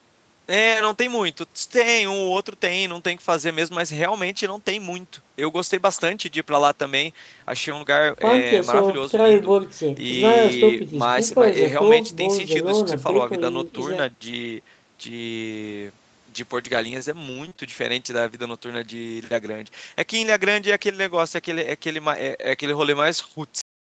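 A speech recording carried over a call path, band-limited with nothing above 8 kHz, which fits an Opus codec around 32 kbps. Between 17.21 and 17.60 s there is repeated packet loss (robotic sound): four short gaps, the longest 21 ms, patched by extending the preceding audio, so about 17% of that stretch, roughly a tenth of a second, is reconstructed and sounds choppy. On a spectrogram the harmonics freeze into flat, smeared blocks. At 23.61 s comes a cut-off end: the last buffers never played, so the sound stops mid-utterance and drops straight to digital silence with no decay. The waveform flatlines abruptly, and the spectrogram shows a sharp vertical edge.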